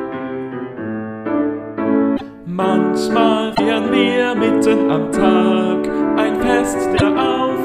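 The sound skips ahead with a brief garbled glitch, about 60 ms each, at 2.16, 3.54 and 6.96 s, most likely a broken MP3 bit reservoir after cut frames.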